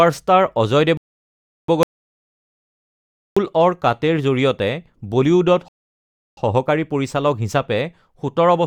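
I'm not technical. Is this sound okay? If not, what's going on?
No. Twice the player ran out of downloaded audio and paused for more, a rebuffering stall. The speech freezes into silence at 0.97 to 1.68 s and 5.68 to 6.37 s, then carries on exactly where it stopped. Nothing is missing, but each pause adds about 0.7 s.

Separately, from 1.83 to 3.37 s there is an audio dropout to silence, likely from the input being briefly lost, perhaps a loose connection or an accidental mute. The speech cuts to total silence, with no background sound at all, and about 1.5 s of what was being said is gone for good.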